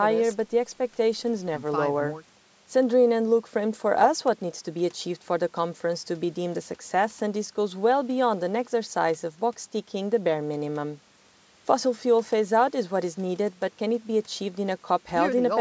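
Speech with no technical fault to report. It has passed through a call's microphone processing, which trims away the lowest bass and leaves nothing above 8 kHz, as that path normally does.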